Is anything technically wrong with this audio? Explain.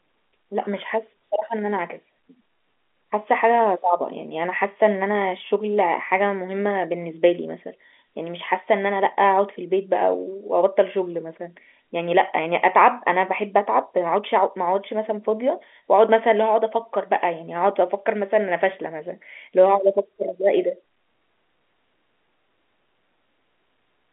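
No, nothing is technically wrong with this speech.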